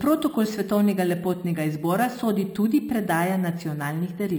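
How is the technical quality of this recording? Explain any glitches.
The recording is marred throughout by imaging from sample-and-hold upsampling. The speech appears to have been raised from a rate of about 12 kHz to 44.1 kHz by simply repeating each sample, with no smoothing filter. A mirrored copy of the speech spectrum therefore fills the 6 to 12 kHz band at about 22 dB below the speech. It is heard as a bright, metallic fizz that rises and falls with the speech. On a spectrogram, the harmonics reflect downward above 6 kHz, so image lines fall as the pitch rises. The waveform shows small staircase steps.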